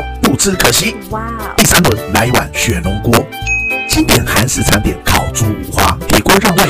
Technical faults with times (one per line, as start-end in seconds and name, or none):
0.00-6.69 integer overflow